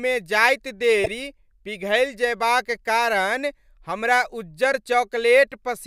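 At 1.04 s, just before "पिघलि जएबाक", the speech is interrupted by a corrupt frame decoded. It lasts until 1.07 s, about 34 ms. Flipped bits inside the compressed data gave the decoder wrong gains or misread codes. It played the damaged data anyway. That put energy at frequencies where none belonged, across what sounds like a couple of frames. The result is a brief, harsh squeaky burst, peaking at around -10 dBFS.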